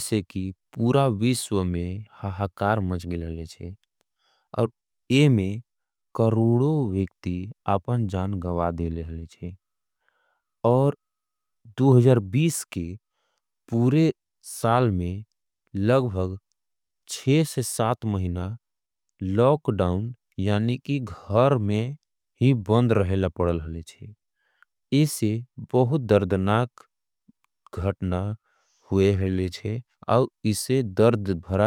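No technical faults are audible anywhere in the speech recording.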